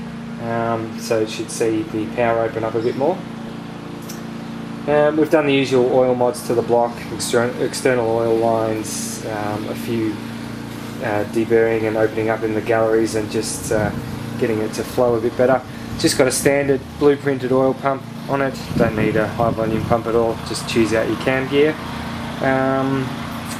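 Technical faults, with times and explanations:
Throughout: MP2 compression. The top end sounds dull and there's a gurgly, grainy edge, which fits Layer II coding at around 80 kbps. At that rate, upper sub-bands get starved of bits and flicker off, and what's left is coarsely quantised. This is likely the cause.
3.47–3.70 s and 19.53–19.62 s: DAB burbling. There are two short bursts of burbling on top of the sound. Occasional bit errors, a few per thousand, slipped past error correction and corrupted samples, so short blips of noise land in single sub-bands.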